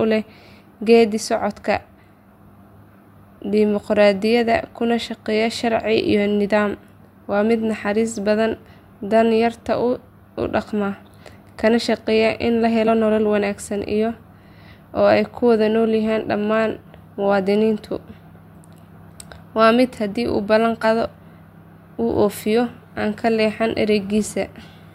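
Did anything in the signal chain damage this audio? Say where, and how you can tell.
Yes: damaged data in the compressed stream (codec stage) makes brief glitches at 12.87–12.89 s, after "kana shaqeeya in la", and 20.83 s, after "haddii uu ballan", as the decoder loses frame sync.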